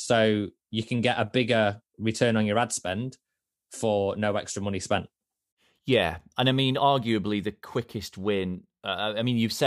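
Speech recording, no technical faults identified anywhere in the clip.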